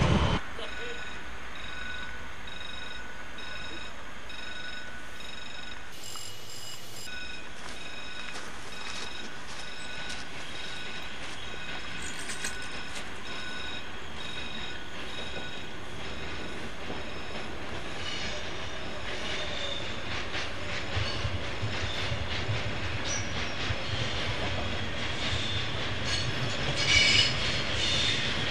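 From 5.92 to 7.07 s there is a section at the wrong speed. For just over a second the sound runs at 1.97 times its proper rate. Pitch rises with it, by roughly ten semitones. The passage turns thin, high and hurried, then drops back abruptly to normal pace. Speed and pitch move together, which points to a playback or editing clock mismatch. The likely cause is that this stretch was resampled to the wrong rate.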